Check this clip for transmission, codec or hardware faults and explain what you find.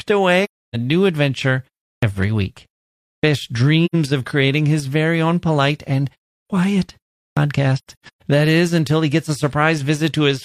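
There are two faults here: dropouts from AAC frame loss with muting, and clipped starts after a pause.

AAC frame loss with muting happens at 0.44–0.76 s, at 3.85–3.95 s just before "of creating his very", and scattered across 7.78–8.23 s, with the longest gap around 150 ms. The decoder zeroes the lost frames and the overlapping windows fade the sound out and back in, so you hear soft-edged holes.

Clipped starts after a pause are at 1.95 s after "new adventure", 3.16 s, 6.42 s after "very own polite and", and 7.30 s. Each time, roughly 70–80 ms of the onset goes missing after a 0.34–0.57 s gap. The output device is waking or relocking after the silence, so speech begins abruptly without its first sounds.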